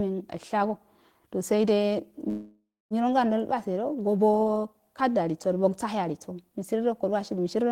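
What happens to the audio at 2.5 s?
A call audio freeze runs from 2.29 to 2.94 s, likely because delayed packets left the jitter buffer empty. The last sound is stretched into a fading buzz or hiss for about 0.6 s, including roughly 0.24 s of silence. The speech then resumes where it stopped, with nothing lost but everything after it about 0.6 s late.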